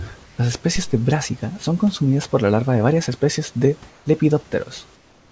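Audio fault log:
0.24–0.38 s, 3.90–4.06 s (just after "de varias especies de") and 4.96–5.32 s, comfort noise in place of the background: in each pause the room background, which sits about 30 dB below the loudest speech, gives way to a smooth, featureless hiss, about 2 to 5 dB quieter, lasting 140 ms, 160 ms and 360 ms. The likely cause is discontinuous transmission, with the receiver synthesising generic noise instead of passing the real ambience.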